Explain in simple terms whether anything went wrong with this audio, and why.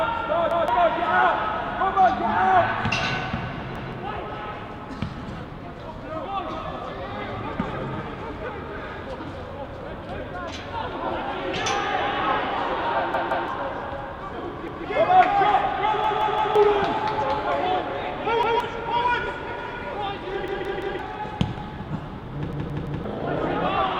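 The audio stutters eight times: a chunk of about 0.17 seconds plays again with an abrupt join. It repeats once at 0.51, 3.76, 14.68 and 18.43 s, twice at 13.14 s, and three times at 16.04, 20.48 and 22.53 s. This is a repeated buffer. New audio didn't reach the player in time, so it replayed the last chunk, which fits an 8192-sample buffer. The sound that should have come next is skipped.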